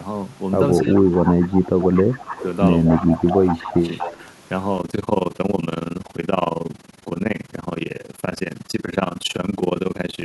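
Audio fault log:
0.77–1.01 s, 1.25–1.45 s, 1.81–2.46 s, 2.86–4.21 s: echo leak. Likely an incomplete echo cancellation on a far loudspeaker, returning a copy delayed by 239 ms at about 15 dB down, rising to about 10 dB down in the last stretch.
0.80–2.15 s, 2.98–3.83 s, 4.13–4.18 s: speech suppressed in double talk. The echo canceller likely pulled the talker down along with the echo, causing dips of roughly 20 dB, then 10 dB, then 5 dB.
4.78–10.24 s: overlap-add ripple. Reassembled frames do not sum to constant gain, so the level pulses about 60 dB deep at roughly 20 Hz, a harsh fast flutter.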